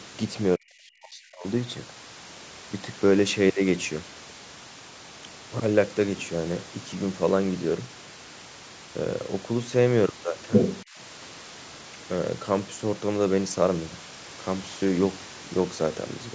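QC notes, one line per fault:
0.57 to 1.46 s, speech suppressed in double talk: the talker's speech sinks and at its deepest falls by something like 40 dB, with about a second affected in all. This is likely an echo canceller that heard both sides talking at once, could not tell the local talker from loudspeaker echo, and turned the whole microphone signal down.
10.52 to 10.84 s, other side's voice leaking through: a second, foreign voice cuts in for about a third of a second, roughly as loud as the talker or a little louder, and sounds like a distinct layer above the room noise. It is likely far-end audio from the loudspeaker that the echo canceller did not fully remove from the microphone path.
10.84 to 10.98 s, speech suppressed in double talk: right after that leak, the talker's speech dips again for about 150 ms, by something like 25 dB, a brief dip rather than a full dropout. The likely cause is the same canceller reacting to overlapping talk by attenuating everything, so the local talker is pushed down along with the residual echo.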